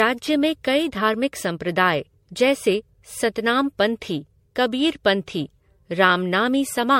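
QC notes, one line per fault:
Throughout: generation loss. The speech has a swirly, watery texture with hollow, notched-sounding gaps in the spectrum, and consonant attacks are smeared rather than crisp. Nothing is present above 16.5 kHz. The damage is heavier than a single MP3 pass at a rate that sounds like about 64 kbit/s would leave. The likely cause is repeated MP3 decode and re-encode, around seven passes, with each pass quantising again on a shifted frame grid so the noise and holes accumulate.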